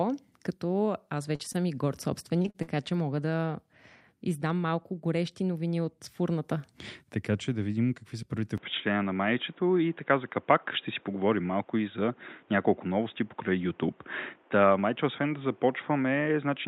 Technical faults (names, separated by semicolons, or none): repeated packet loss (robotic sound); input switched to a poorer device